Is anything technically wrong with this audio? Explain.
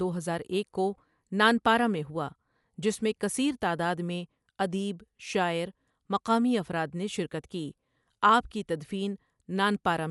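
Yes. Throughout the speech, Dolby Digital compression is likely at work, consistent with roughly 64 kbps: the band stops near 11.5 kHz and dither-filled bands leave it dull and audibly rough.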